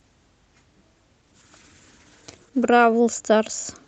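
From 1.24 to 2.77 s, a call bitrate drop turns the speech coarse and muffled, consistent with Opus falling from 32 to 12 kbps; unlike packet loss, nothing drops out.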